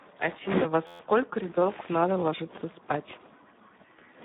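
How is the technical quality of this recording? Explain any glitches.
Technical quality is poor. The whole recording is coded heavily, and one brief freeze interrupts it.

Throughout, Speex codec damage makes the speech hoarse and noisy. The band runs only from 150 Hz to 3.7 kHz, which fits a low-rate setting near 8 kbps.

From 0.87 to 1.00 s, a system hang loop repeats one 11.6 ms slice. This produces a steady buzz at 86.1 Hz. That fits a 512-sample buffer cycling while the system stalled, with little or no audio lost.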